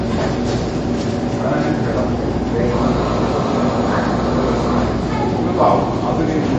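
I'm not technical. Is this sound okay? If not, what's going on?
No, the whole clip has a dull, clearly watery, swirly quality, and nothing comes through above about 8.3 kHz, so the crisp top end is missing. That's most likely heavy MP3 compression: the encoder ran short of room, chopped off the treble and dropped faint detail.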